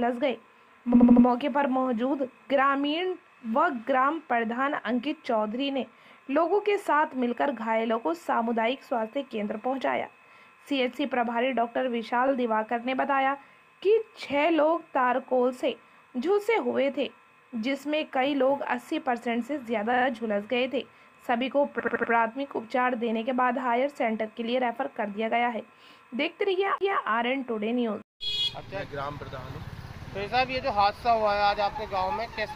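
A stutter first appears between 0.93 and 1.26 s, where an 80 ms slice of sound plays four extra times. These are repeated frames: a run of compressed frames was duplicated in the stream, so the decoder replays the same fragment, and each repeat lengthens the audio, here by 320 ms. The pattern returns three more times. At 12.27 to 12.32 s, a 40 ms block plays once more, adding 40 ms. At 19.93 to 20.05 s, a 40 ms block plays three extra times, adding 120 ms. At 21.79 to 22.12 s, an 80 ms block plays four extra times, adding 320 ms. The block sizes fit frames of about 20 ms each.

At 26.78 s, a brief drop-out of about 30 ms is followed by an abrupt discontinuity, with the sound resuming from somewhere else. This is a CD skip: a knock or a flaw on the disc threw the laser onto a different turn of the spiral, so the player muted momentarily and carried on from a new position.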